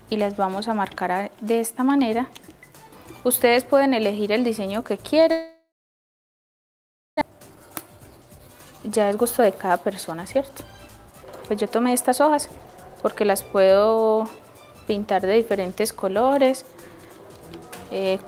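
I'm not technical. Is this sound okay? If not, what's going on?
No. Long network dropout, 5.31 to 7.23 s: the sound smears into a fading buzz, then goes silent, likely because audio stopped arriving, and returns with about a second missing.

Jitter buffer speed-up, 7.30 to 14.47 s: the player trims tiny slices to catch up after the gap, so sound runs about 12% faster, hurried but at normal pitch.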